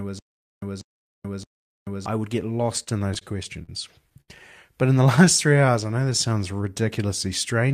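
Right from the start, and already going when the clip opens, there's a stutter with silent gaps running to about 2.06 s. A burst of roughly 0.19 s keeps coming back every 0.62 s with about 0.43 s of dead silence between repeats. It comes round three times before "I would get". It sounds like the player likely stalled, replayed its last fragment on each retry, then ran dry, so whatever belonged in those gaps is gone.

Just after "I would get", from 2.83 to 3.70 s, you get repeated stalls (stutter). There are six small holes, the longest about 49 ms, all filled by stretching the previous sound, about 126 ms in total. That's roughly 15% of the stretch. Nothing's actually missing, but the delivery drags and catches as the jitter buffer keeps running empty on late packets.

At 4.21 to 4.30 s there's a short stall from a late packet. One packet didn't turn up in time, so the receiver held the last sound for about 71 ms and then picked up where it left off. 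You hear a sound hang on a beat too long, maybe with a faint buzz or dip, and the delay is now 71 ms longer.

Then from 4.87 to 6.40 s comes a jitter buffer slow-down. The receiver padded out about 158 ms by repeating single pitch periods and bits of pauses over and over to rebuild its reserve. The audio plays at about 90% speed with the pitch unchanged, so sounds feel drawn out.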